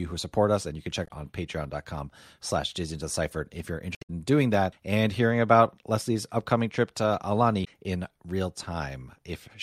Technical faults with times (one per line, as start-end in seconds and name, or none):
1.04-1.11 damaged data in a compressed stream
3.95-4.10 damaged data in a compressed stream
7.61-7.68 damaged data in a compressed stream